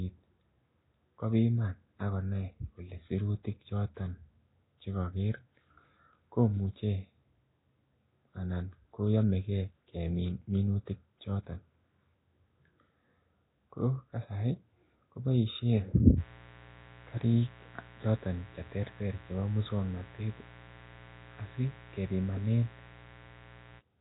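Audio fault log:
Throughout: Nellymoser compression. The speech has a rough, hissy halo and a smeared, underwater quality, and there is nothing above 3.8 kHz. This is likely Nellymoser Asao at around 16 kbps, which codes short blocks with few bits and fills weak bands with noise.
16.16 to 23.82 s: mains buzz. Starting just after "kasari ko boishen", a steady, raspy buzz sits about 20 dB below the speech. It is built on 60 Hz harmonics, from sharp switching spikes that enter twice per mains cycle through a dimmer, rectifier or missing shield.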